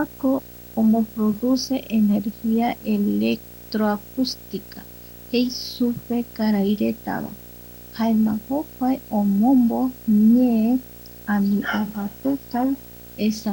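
From start to finish a steady buzz at about 60 Hz, more precisely 59.94 Hz, sits under the speech, with a gritty hash above it and a thin, very high whistle at 15.7 kHz. The whole layer is roughly 20 dB below the speech. This is video or display buzz: a screen or video cable is coupling into the audio, so the picture's field rate becomes the buzz and its line scanning becomes the whistle.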